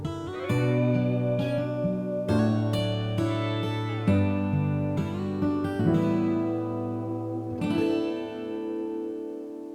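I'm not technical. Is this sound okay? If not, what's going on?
Yes, this sound is okay, and there's nothing going wrong with it.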